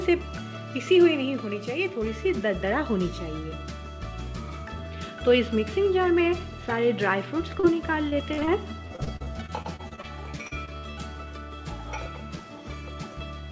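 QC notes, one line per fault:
7.60–7.65 s, short concealed packet loss: roughly 40 ms of audio failed to arrive in time and the receiver covered about 33 ms of it by extending the preceding signal, continuing its pitch where it had one and substituting shaped noise where it did not, before crossfading back into the received stream. The result is a single brief smear or wobble rather than a hard dropout.
8.09–8.49 s and 8.87–10.99 s, repeated packet loss (robotic sound): the first stretch has 4 gaps totalling about 100 ms (longest 42 ms, a quarter of the span concealed), the second has 16 gaps totalling about 440 ms (longest 60 ms, about a fifth concealed). Each gap is patched by extrapolating the last sound, but the next loss arrives before the decoder settles. The stacked patches produce choppy output with fragments missing, all within a band that stops at 8 kHz, consistent with a G.722-style wideband call path.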